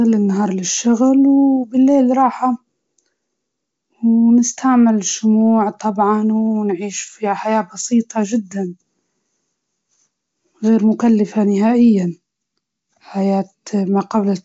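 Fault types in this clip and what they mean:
Nothing stood out on listening to this speech, which has the band-limited sound of G.722 wideband telephone coding with no content above about 7.7 kHz.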